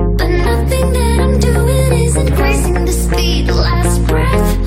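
No technical faults can be heard at any point in the audio.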